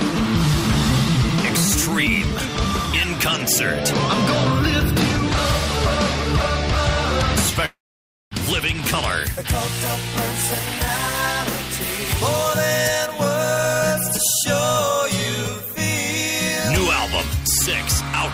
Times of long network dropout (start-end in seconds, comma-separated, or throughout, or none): 7.65-8.33